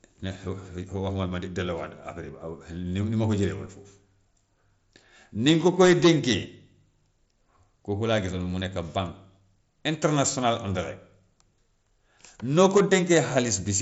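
No technical faults occur anywhere in this speech clip.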